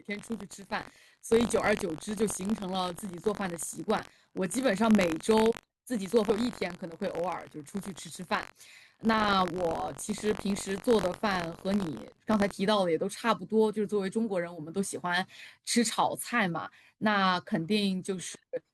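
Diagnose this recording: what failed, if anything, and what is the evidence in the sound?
The failure is buffer tearing at the driver or buffer stage. From 0.0 to 12.52 s the speech carries a robotic buzz at about 46.9 Hz, which fits a 1024-sample buffer. The rattle rides on the signal and is absent without it. The writing program and the hardware reader have drifted and cross inside each period. So a small slice, around two percent of each buffer, replays audio from roughly a tenth of a second earlier, with hard joins at both edges.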